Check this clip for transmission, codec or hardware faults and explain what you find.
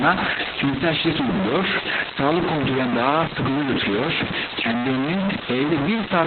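Two faults run through the whole speech clip.

Throughout, low bit depth without dither: harsh grit tracking the speech, with error roughly as loud as the signal itself. It is likely from truncation to about 3 bits. Unlike steady hiss, it vanishes in silence.

Throughout, Opus voice compression: nothing above 4.3 kHz, with a muffled, hoarse, robotic tone. That fits narrowband SILK coding at around 8 kbps. Unlike plain low-pass filtering, it also smears the voice's texture.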